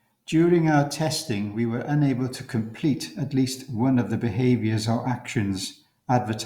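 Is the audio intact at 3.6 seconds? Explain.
Yes, the speech at 3.6 seconds is intact, with no audible dropout, click, distortion or other fault at that moment.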